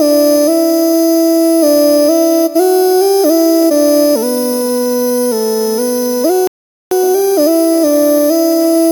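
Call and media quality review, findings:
Playback stall, 6.47 to 6.91 s. The player's output likely starved of buffered data or its playback thread was blocked. Audio cuts to silence mid-flow for about 0.44 s, then resumes. The gap is clean silence rather than noise, consistent with the output simply waiting for data to return.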